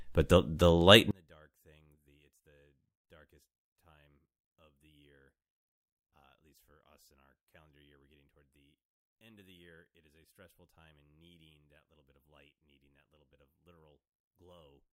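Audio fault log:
1.11–14.93 s, one channel inverted: after "the the light" the speech drops about 35 dB to a faint trace. Likely reversed polarity cancelling centred sound in mono.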